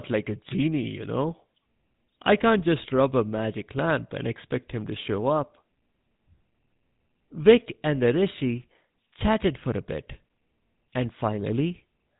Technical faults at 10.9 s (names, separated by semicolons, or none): GSM full-rate codec